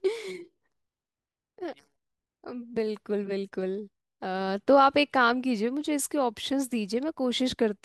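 Listening to the speech in the clip, nothing stood out as a technical problem at any point.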